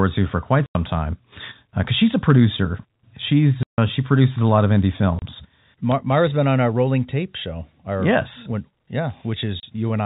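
Packet loss filled with silence cuts this speech clip four times: 0.66 to 0.75 s after "to for quite", 3.63 to 3.78 s before "she produces a lot", 5.19 to 5.22 s after "a lot of indie", and 9.60 to 9.63 s. Each hole is a multiple of 30 ms, which fits a 30 ms packet, and the receiver inserted silence with abrupt edges. The G.711 telephone coding carrying it is band-limited below 4 kHz.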